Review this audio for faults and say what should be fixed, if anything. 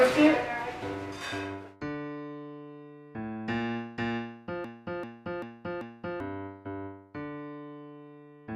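A broken-record loop runs from 4.64 to 6.20 s: one 0.39 s fragment plays four times back to back, and the audio due there is lost. The likely cause is a stalled player, encoder or stream resending its last buffer. Waveform and spectrogram show four identical blocks repeating. Preventing it means detecting stalls and inserting silence or concealment rather than replaying stale buffers.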